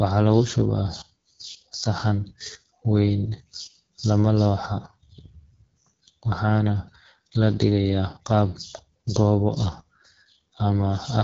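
Throughout, AMR wideband (HD Voice) coding leaves the speech rough and raspy, fitting a low mode near 8.85 kbit/s; unlike narrowband telephony, content extends to about 6.7 kHz.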